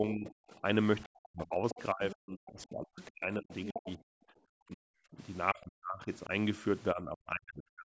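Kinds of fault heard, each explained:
Speech suppressed in double talk: the voice repeatedly dips, by up to about 40 dB, through most of the clip, likely because the echo canceller mistook overlapping talk for loudspeaker echo.
Other side's voice leaking through: a second voice comes through in scraps near 1.7 s, 3.0 s and 3.5 s, likely loudspeaker echo the canceller did not fully remove.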